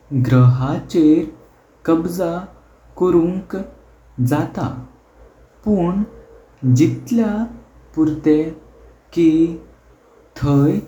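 A short recording of speech, with no technical fault audible at any point. Nothing in the signal path calls for comment.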